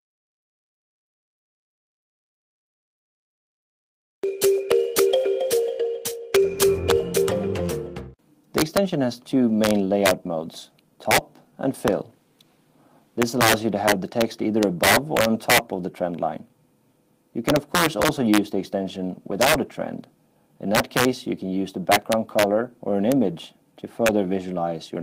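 Integer overflow runs throughout: driven about 6 dB too hot, the rare peaks wrap to the opposite sign, giving violent cracks, sign-flipped spikes on the waveform and full-height broadband streaks.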